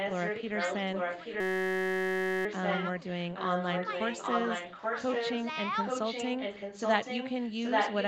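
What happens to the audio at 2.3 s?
Two faults overlap here. From 1.40 to 2.45 s a system hang loop is under way: the computer or its audio driver stalled while the sound hardware kept replaying the same small stretch of its ring buffer. Each pass lasts 5.33 ms, which fits a 256-sample buffer, and it repeats close to two hundred times. Cycling that fast, at 188 Hz, the fragment fuses into a steady, flat buzz instead of a stutter, replacing the sound for about a second.

Beneath that, an echo leak runs from the start to 5.45 s. A delayed copy of the speech trails the original by about 0.83 s, at roughly the same loudness as the direct speech, so the two overlap and blur together. The likely cause is a far end playing the call through a loudspeaker, where the echo canceller failed to strip what its microphone picked up and sent that copy back down the line.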